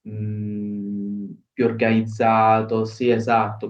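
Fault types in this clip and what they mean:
No faults can be heard.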